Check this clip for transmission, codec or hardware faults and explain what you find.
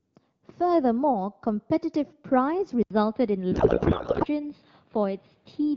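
Two faults are present in this speech clip, one overlapping the other.

From 2.83 s to the end, the audio likely comes from an input switched to a poorer device. After an 80 ms gap the sound loses everything above 5 kHz and turns duller, with a faint new background noise about 40 dB down, though loudness barely changes.

From 3.52 to 4.26 s there is a codec payload misread. The receiver unpacks the AMR-WB bits with the fields in the wrong positions, which fits octet-aligned frames being read as bandwidth-efficient, so the speech gives way to garbled, warbling noise that hardly tracks it.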